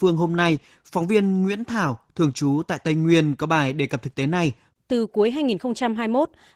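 Opus voice compression affects the speech throughout. It sounds hoarse and slightly robotic, which fits a bitrate near 16 kbps coding the excitation coarsely.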